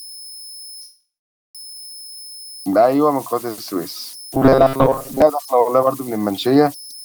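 Converter idle tones run through the whole speech clip, a tone around 5 kHz about 21 dB below the signal. An undithered converter is cycling through repeating bit patterns. From 0.81 to 1.57 s comes a call audio freeze. Packets were likely delayed, emptying the jitter buffer. A fading fill and 520 ms of silence follow, then the speech resumes about 0.73 s late with nothing lost. From 4.34 to 5.22 s there is robotic sound from repeated short buffers. A rigid 134 Hz buzz replaces most of the stretch, likely from a block of about 7.5 ms being repeated.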